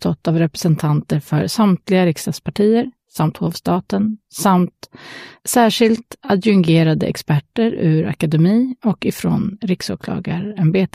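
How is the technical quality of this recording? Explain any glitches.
No glitches or technical faults can be heard anywhere in the recording, so there is nothing to explain.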